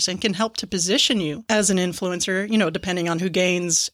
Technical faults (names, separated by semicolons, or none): none